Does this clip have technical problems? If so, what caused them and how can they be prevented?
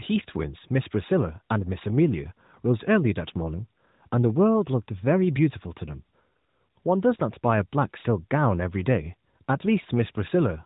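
No, the speech shows no technical faults; it has passed through the AMR narrowband mobile codec at 12.2 kbps, which confines it to the band below 4 kHz, as that path normally does.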